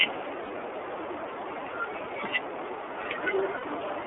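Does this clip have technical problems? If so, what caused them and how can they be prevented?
Yes. The whole clip carries the sound of the iLBC codec: the speech is band-limited to a telephone line of roughly 300 Hz to 3.5 kHz, with nothing above 4 kHz, and has a plainly audible rough, slightly synthetic edge. That fits a 13.33 kbps mode working in 30 ms frames, where each frame's excitation is coded on its own with no help from the previous one. To avoid this, use a wideband codec such as Opus at a higher bitrate.

Lost iLBC frames occur twice, from 0.45 to 0.52 s and from 3.57 to 3.64 s, and each gap lasts about 60 ms, which points to two consecutive 30 ms frames going missing. In each gap the decoder covers the hole by repeating the last pitch cycle blended with noise, so the speech briefly turns into a held, buzzy vowel. Because iLBC frames are self-contained, the speech recovers as soon as packets arrive again. 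Prevent this with a steadier network path, forward error correction or a larger jitter buffer.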